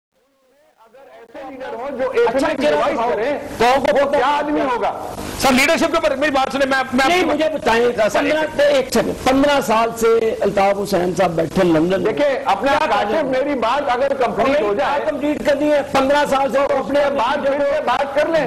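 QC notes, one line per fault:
0.00–2.14 s: truncation distortion on a fade. The undithered fade-in keeps too few bits, around 9, so the quiet start is gritty, worst until 1.31 s.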